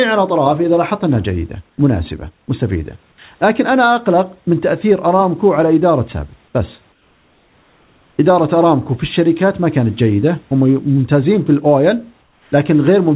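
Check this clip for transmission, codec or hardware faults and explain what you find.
Two kinds of fault show up in this speech clip, both in the pauses and at their edges, heard over a narrowband call path where nothing reaches above 4 kHz, which fits G.711 mu-law at 64 kbps.

Comfort noise in place of the background occurs at 1.70 to 1.78 s, 6.92 to 8.18 s and 12.22 to 12.52 s. The room noise, about 40 dB under the loud passages, turns smooth and featureless and drops by about 3 to 4 dB. The likely cause is discontinuous transmission: the sender goes quiet and the receiver synthesises shaped noise. A dropout would leave a hole of silence, but here noise carries on at a steady hue.

Sound dropped by the voice detector occurs at 2.46 to 2.48 s, where about 10 ms of speech gives way to that same steady noise before sending resumes. This is likely the detector mistaking part of the speech for background and cutting transmission early. 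Packet loss would punch out a chunk mid-sound or smear it through concealment, whereas here the trimmed part is replaced by the flat comfort-noise bed heard in the pauses.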